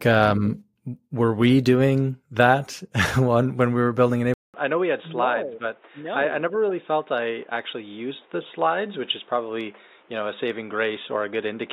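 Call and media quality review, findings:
Input switched to a poorer device, likely. From 4.34 s, after "when we were building", through the end. A 200 ms gap, then speech goes dull and boxy with nothing above 3.8 kHz, drops roughly 5 dB, and gains new background noise about 30 dB down. Unlike a codec bandwidth drop, the level, tone and noise floor all change together, with a gap at the switch.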